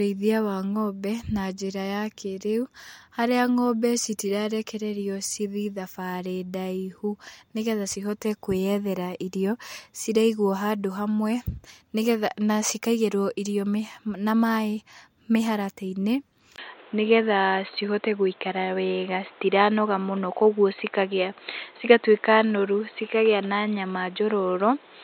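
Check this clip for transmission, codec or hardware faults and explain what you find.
One fault: at 16.56 s the speech turns duller and boxier through to the end, after a 20 ms gap. An input switched to a poorer device is likely the cause. Its narrower band shows on a spectrogram as nothing above 4.2 kHz, with a level step of roughly 5 dB and new noise about 30 dB down.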